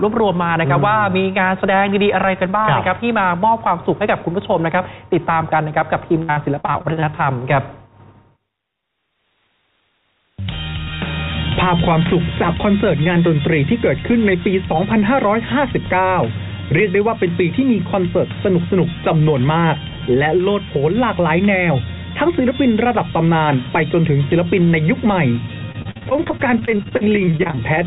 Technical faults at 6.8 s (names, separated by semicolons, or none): repeated packet loss (robotic sound)